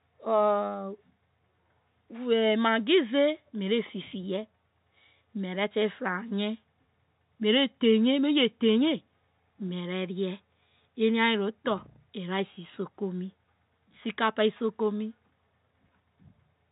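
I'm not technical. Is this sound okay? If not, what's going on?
Yes, nothing here is broken; it's speech sent the way an ordinary landline phone call carries it, so it sounds a bit narrow with nothing above about 3.8 kHz, which is simply how telephone lines pass sound along.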